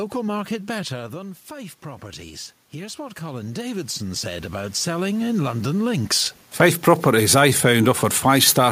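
A speech recording in which automatic gain rising occurs between 2.72 and 5.76 s. After the input level drops by about 10 dB, the gain control raises its gain by about 10 dB over roughly three seconds, so the voice and the room noise swell up together rather than the voice alone recovering. The level shifts heard around 1 s and 6 s come from the talker moving relative to the microphone.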